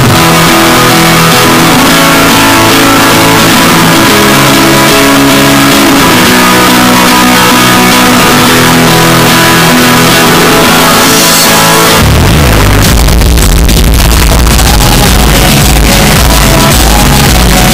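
Across the full 18 seconds the audio is a float-read-as-integer fault: the waveform is nearly square and sits at an almost fixed, high level throughout, so it is extremely loud and harsh, and quiet background material comes up as loud as the foreground. The likely cause is 32-bit float samples being read as 32-bit integers, so each value is set by its sign and exponent bits rather than its actual amplitude.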